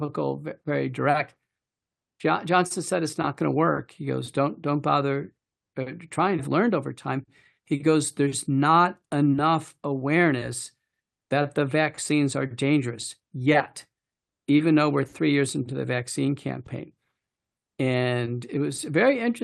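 At 6.39 s there's a skip ahead: something like 0.7 s of speech got dropped, either in transit or when the jitter buffer overflowed, so playback jumps straight to audio that was already queued. There's no fill, so the two sides just butt together.

Right after, from 6.48 to 7.83 s, you get a jitter buffer speed-up. The buffer was still holding more than its target, so the receiver trimmed short pitch-period chunks over and over, roughly a tenth of a second in total. The speech runs at about 106% speed, same pitch, and sounds a touch rushed.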